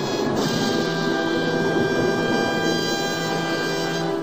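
Nothing in this audio stands out as a technical fault, so there's really nothing to flag here.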